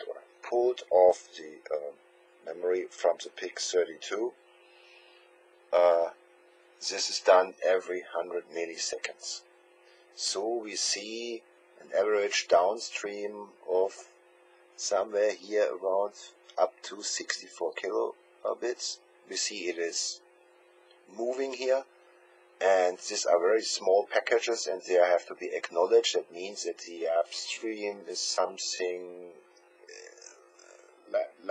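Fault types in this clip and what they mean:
Time-stretched section: from 26.78 s to the end at 31.51 s, the sound abruptly slows to about 0.63 times its pace with its pitch unchanged, so it drags. Likely software lengthening the passage by repeating short pieces while preserving pitch.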